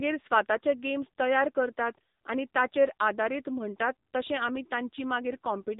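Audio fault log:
throughout, AMR narrowband mobile codec: the speech sounds buzzy, thin and somewhat synthetic, with plainly audible coding damage and no content above about 3.8 kHz. AMR-NB samples at 8 kHz and rebuilds speech from a vocal-tract filter excited by a few pulses in each 5 ms subframe of a 20 ms frame. Here so few pulses are spent that the excitation turns coarse, which fits one of the lower modes, around 8 kbps.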